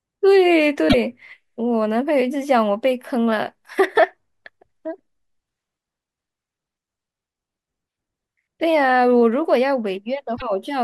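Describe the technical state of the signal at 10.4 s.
At 10.4 s you're right inside a short burst of damaged data in the compressed stream, running from about 10.33 to 10.42 s. Some bytes there are corrupt, so the decoder misreads those frames and loses sync while it hunts for the next valid header, which comes out as a brief chirp, squawk, click or short hole.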